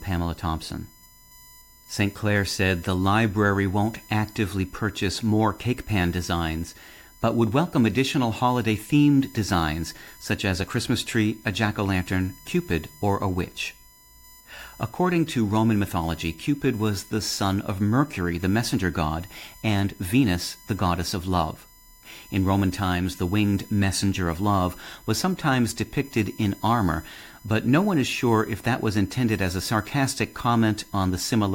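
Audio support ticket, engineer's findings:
USB whine throughout, fixed 1 kHz tone with harmonics, strongest at 12 kHz, roughly 30 dB below speech. USB 1 ms frame current leaking via power or ground.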